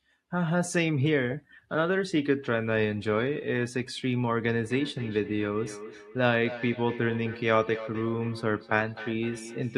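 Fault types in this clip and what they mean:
Feedback echo between two devices: another device replays into this microphone from 4.65 s, so spectrograms show fainter copies, about 13 dB down, roughly every 300 ms.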